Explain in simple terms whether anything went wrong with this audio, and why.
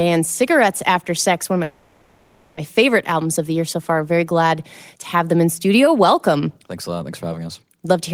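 Call audio freeze from 1.63 to 2.58 s: the speech stalls into a fading buzz for nearly a second, likely from delayed network packets, then resumes with nothing lost.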